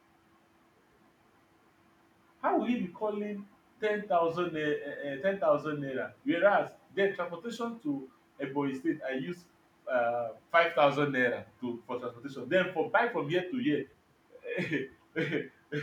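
No technical faults are audible.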